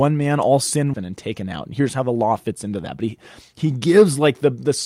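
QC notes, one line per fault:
0.93–0.95 s, skip ahead: The speech jumps abruptly forward, with the two sides of the cut butted together and no silence or fill between them. About a second of audio never plays. Later audio was already queued, and a stretch of roughly that length was discarded, either lost in transit or thrown out when the jitter buffer overflowed. Playback resumes from the newer material, and the delay shrinks by about the same second.
1.03–2.10 s, jitter buffer speed-up: For about a second the speech runs slightly hurried, at roughly 105% of normal pace, while pitch stays where it was. The jitter buffer was holding more audio than its target, as happens when delayed packets arrive in a bunch. To pull the delay back down, the receiver repeatedly trimmed out short pieces one or a few pitch periods long, removing around 70 ms in total across this stretch.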